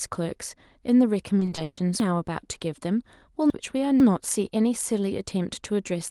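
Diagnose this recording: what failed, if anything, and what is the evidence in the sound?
Network packet loss at 1.39 to 1.79 s. Repeated packet loss (robotic sound) breaks this speech into five holes within 0.4 s. The receiver fills each one by stretching the last sound, so about 220 ms of the span, 55 percent, is concealed material, and the longest gap runs 140 ms. On a spectrogram, harmonics freeze into flat, smeared bands between short stretches of normal speech. The waveform shows repeated, too-regular cycles.

Between 2.0 and 4.0 s, chunks out of order point to the network jitter buffer or the storage write path. A 500 ms block plays three chunks late, after the three blocks that should follow it. Nothing is missing, but the speech is heard jumbled, with three hard joins. The waveform shows abrupt amplitude steps at those 500 ms boundaries. The spectrogram shows vertical discontinuities where formant tracks fail to line up.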